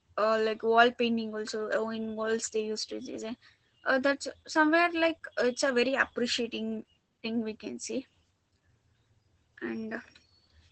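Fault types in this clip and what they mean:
Opus voice compression: The speech sounds muffled, hoarse and faintly robotic throughout, with nothing above about 8.7 kHz. Opus's SILK linear-prediction coder, held to wideband, is coding the excitation coarsely, which fits a bitrate near 12 kbps.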